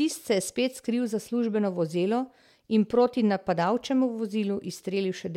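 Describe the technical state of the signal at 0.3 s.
At 0.3 s the speech signal is intact, with no audible technical fault at that moment.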